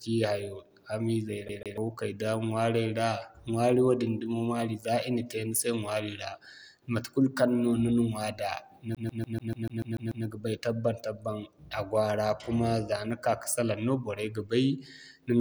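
At 1.49 to 1.78 s and again at 8.95 to 10.26 s, just before "ga bay", the speech sticks like a CD stuck on one turn: a scratch keeps throwing the laser back, replaying the same 146 ms slice with a brief mute at each jump, twice, then nine times. Unlike a buffer glitch, the repeat is rigidly periodic and disc-like.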